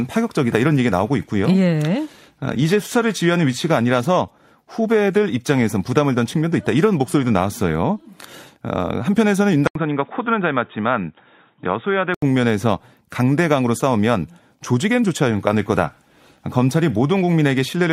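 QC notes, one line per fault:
1.75–7.75 s, adaptive stream at a lower bitrate: the speech turns abruptly duller and swirly, with the top end sounding synthetic and smeared rather than simply missing, then snaps back to full clarity at 7.75 s, with no gap at either edge. The stream fell back to a leaner encoding for six seconds; the rebuilt, hissy treble fits a switch from roughly 96 kbit/s AAC to about 32 kbit/s HE-AAC, whose high band is reconstructed rather than coded.
9.67–12.22 s, input switched to a poorer device: after a brief dropout of about 80 ms, the speech becomes narrow and boxy, with nothing above 3.8 kHz, a little quieter, and carrying a faint new background noise well below the speech. At 12.22 s the full, brighter sound returns. This is likely the recording changing to a different, band-limited microphone or headset call profile, with its own tone, gain and noise floor, and then switching back.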